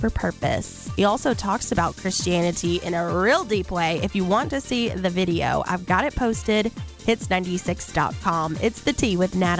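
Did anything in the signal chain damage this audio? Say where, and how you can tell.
No, nothing damaged this audio.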